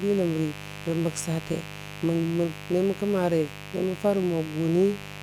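From start to finish there's a mains buzz riding under the speech, sitting not far below it, maybe 15 dB down. Sharp spikes are getting in twice per 50 Hz cycle, spraying harmonics up into several kHz, so it comes across as a steady, raspy buzz.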